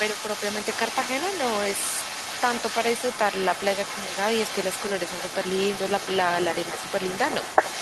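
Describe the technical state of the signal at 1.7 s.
At 1.7 s an echo leak runs through the whole clip, 0 to 7.82 s: a distinct copy trailing by 259 ms, roughly 10 dB down, likely unremoved loudspeaker pickup, unlike diffuse reverberation.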